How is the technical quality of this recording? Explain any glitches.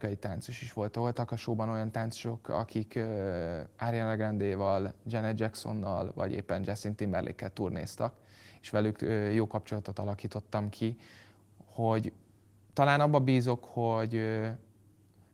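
No glitches turn up anywhere in this speech recording; it's carried through Opus voice compression at about 20 kbps in its full-band hybrid mode, and nothing in it stumbles or breaks.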